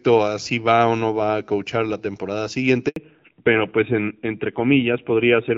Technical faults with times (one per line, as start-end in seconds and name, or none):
2.88-2.96 handover gap
2.96-5.58 fallback to narrowband